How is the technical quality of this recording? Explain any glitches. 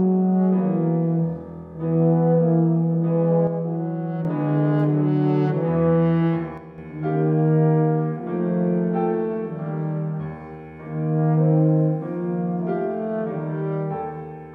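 The recording has two brief dropouts where the level falls suddenly. One channel drops out from 3.47 to 4.25 s and again from 6.58 to 6.78 s. Each time the sound abruptly falls by about 6 dB and then snaps back, most likely because one stereo channel goes silent while the other continues.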